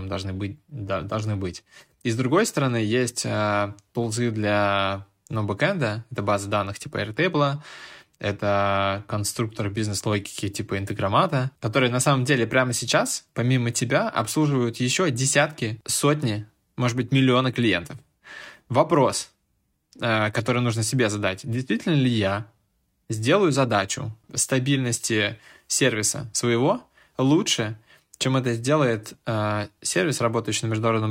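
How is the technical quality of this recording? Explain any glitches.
No glitches can be heard anywhere in the recording; the speech signal stays continuous and stable throughout, with nothing in it that points to a technical problem.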